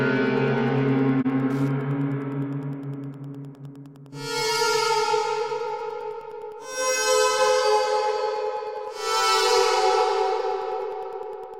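Running under the whole clip there's a steady ticking at just under ten per second, about 30 dB below the sound itself. That's Wi-Fi interference. A nearby Wi-Fi radio's beacon, sent every 102.4 ms, is getting picked up and rectified by the audio circuitry, so each beacon lands as a faint tick. The spacing is what gives it away: it's too regular to be anything in the source, and it carries straight through the loudest and quietest passages alike.

At 1.21 s the sound briefly fades out and back in, returning by 1.27 s. It's AAC frame loss with muting. The decoder had nothing for one stretch, about 42.7 ms, which points to a single dropped frame, and it filled that gap with silence. Because AAC frames overlap, the missing frame doesn't cut off sharply. Instead the neighbouring windows taper into and out of the gap, so you get a brief dip.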